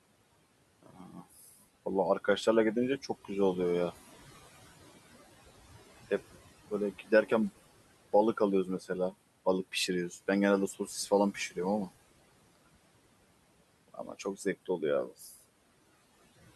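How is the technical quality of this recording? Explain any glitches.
The recording is marred by noise suppressor artifacts throughout and by speech cut by the noise suppressor in five places.

Noise suppressor artifacts run through the whole clip. The suppressor pulls steady background down by about 20 dB, frame by frame. Residual noise pumps between phrases. The room noise sits about 18 dB below the speech.

Speech cut by the noise suppressor occurs at 0.83–1.54 s, 6.7–7.31 s, 8.65–9.13 s, 10.73–11.57 s and 13.6–15.36 s. The suppressor mistakes quiet speech for noise. It turns parts of it down by about 14 to 20 dB, deepest in the last passage. Soft sounds and word endings come out swallowed and faint. The first and last passages lose around half a second each. The middle three lose less.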